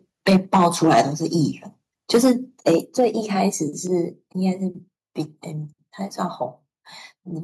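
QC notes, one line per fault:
0.27–1.01 s, 2.14–2.32 s and 2.67–3.05 s: microphone overload. The loudest speech peaks are flattened and crackle harshly. They run about 6 to 7 dB over full scale, and up to about a tenth of samples clip. Likely cause: input gain set too high for the converter.
0.30, 2.85, 3.87 and 4.89 s: microphone volume stepped down. Speech and background drop abruptly each time, by about 2, 5, 3 and 2 dB. The first two fall inside overloaded stretches. Likely cause: call software cutting the device input gain in single steps.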